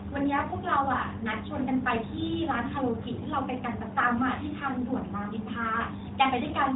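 Nothing here goes wrong at any point in the speech; what you hear is simply the AMR narrowband mobile codec doing its ordinary job, with the top end stopping around 3.8 kHz and only light coding texture, which fits its highest 12.2 kbps mode.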